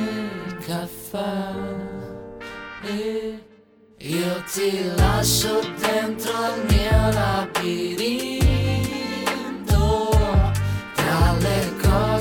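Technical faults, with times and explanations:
11.26–11.28 s: corrupt frame decoded, a loud blip or burst across a couple of damaged frames, with energy misplaced in frequency rather than a single-sample click or a silent dropout.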